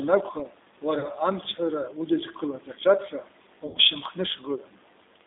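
A speech recording that sounds narrow, slightly rough and synthetic throughout, with nothing above about 3.7 kHz and little below 300 Hz. The damage is plainly audible and consistent with the G.729 codec (G.729A), which fits an 8 kbit/s stream. The codec rebuilds the voice from a vocal-tract filter, a pitch predictor and a few pulses per frame rather than sending the waveform, so detail is replaced by a rough, approximate texture. Twice the voice smears into a stretched buzzy tone or coloured noise that fades: briefly from 0.99 to 1.08 s, where about 40 ms of sound is missing, and longer from 3.67 to 3.78 s, where about 80 ms is missing. This is VoIP packet loss concealed by the speech codec. The decoder repeats its last pitch and filter with falling gain to bridge the gap, which fits two and four lost 20 ms packets. Each frame depends on the previous one, so the voice stays weakened or distorted just after each gap ends.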